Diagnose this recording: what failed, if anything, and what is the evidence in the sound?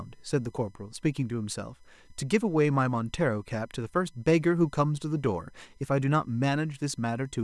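The analogue wiring failed through USB whine. A steady tone at 1 kHz runs under the speech for the whole clip, loudest at 2 kHz, roughly 45 dB down. The bus draws current in 1 ms frames, which leaks through shared power or ground into the audio path.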